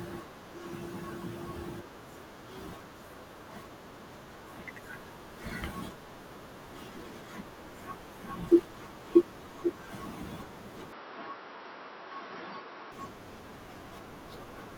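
From 10.92 to 12.92 s speech goes dull, cut off above 5.7 kHz with faint new background noise: likely input switched to a poorer device.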